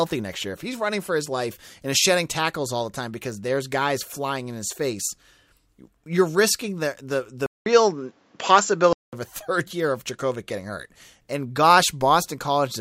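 Right after "you're risking the the", at 7.46 s, the speech drops out for about 200 ms and then comes back duller and boxier, with nothing above 7.6 kHz, a level change of roughly 5 dB and faint new background noise sitting well under the speech. That's the classic input switched to a poorer device signature, most likely the system hopping to another mic or a headset call profile. It switches back at 9.13 s.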